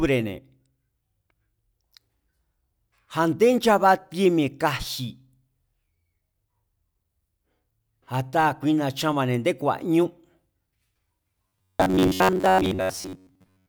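Robotic sound from repeated short buffers runs from 11.48 s to the end at 13.68 s: the speech turns into a rigid, metallic buzz at 93.8 Hz, likely from a 10.7 ms chunk looped while most incoming audio is skipped.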